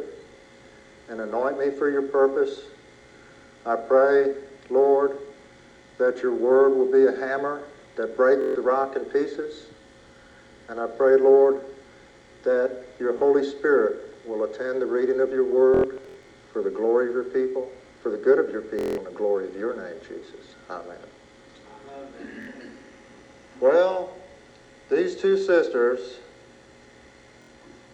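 Bluetooth stutter crops up six times: 8.42–8.56 s, 13.19–13.21 s, 15.74–16.30 s (a scattered patch), 18.79–18.98 s, 22.43–22.47 s and 27.42–27.49 s. Late or dropped packets leave the receiver looping a roughly 23 ms slice, giving a buzzy machine-gun repeat before the audio jumps ahead.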